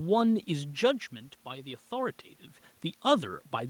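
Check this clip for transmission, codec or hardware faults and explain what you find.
No transmission, codec or hardware faults can be heard in this speech clip. There is steady background noise from the room, and the voice shifts in level at about half a second and again around two seconds, as when a talker moves relative to the microphone.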